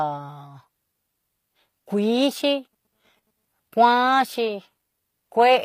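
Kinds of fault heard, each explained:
HE-AAC compression: the speech's treble sounds rebuilt rather than real, with gritty, lispy s sounds and nothing above about 15.5 kHz, likely from a low-bitrate stream around 24 kbps.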